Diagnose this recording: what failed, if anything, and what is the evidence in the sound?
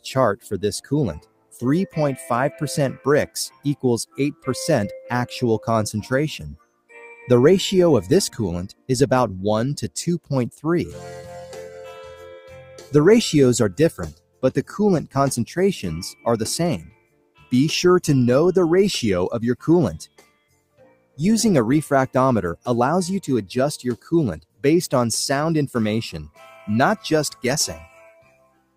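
The failure is in call processing: a noise suppressor meant for speech was left running on this material. Throughout the clip the level swings by roughly 15 dB as the suppressor keeps deciding whether steady content is noise and ducking it. It's a speech-tuned gain stage misreading sustained sound and ambience as background, so the level pumps and thins rather than sitting still. Turning the suppressor off for non-speech sources is the fix.

You can hear the sound cut by the noise suppressor in eight stretches: 0 to 7.28 s, 8.71 to 8.89 s, 10.2 to 12.93 s, 14.12 to 15.15 s, 16.13 to 17.52 s, 20.06 to 21.19 s, 23.97 to 24.64 s, and from 26.27 s to the end. In each the deepest drop is about 20 to 21 dB, as the suppressor clamps down on what it has classed as noise and the sound sinks well below its surroundings.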